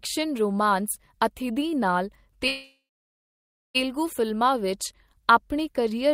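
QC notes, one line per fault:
2.47–3.77 s, call audio freeze: the sound stalls and the last bit smears into a fading buzz, then about 0.96 s of near silence, likely the jitter buffer running dry while packets were held up. Speech resumes where it stopped, nothing lost, just pushed 1.27 s later.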